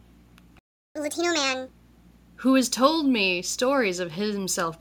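At 0.59 s the speech stops dead mid-flow and stays silent until 0.96 s, a gap of about 364 ms. This is a playback stall. The player likely ran short of data or was blocked, so nothing reached the output.

From 0.96 s to 1.68 s the speech comes back rushed and raised. This is catch-up at higher speed. The player resamples its backlog at 1.5 times normal speed, lifting pitch by about seven semitones, then drops back to normal.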